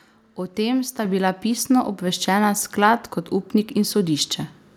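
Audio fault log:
1.05 s, microphone volume stepped up: between "tem sta" and "bila pisno" the level jumps by about 5 dB in one instant step as the input volume is raised. Voice and background noise rise together, unlike a speaker simply talking louder or a gradual gain ramp.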